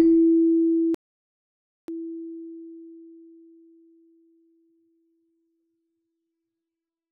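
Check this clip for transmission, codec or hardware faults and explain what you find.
One fault is present. At 0.95 to 1.88 s there is an audio dropout to silence: the sound stops mid-flow for about 0.94 s of silence with no room tone, likely because the input was lost while the recorder kept writing zeros.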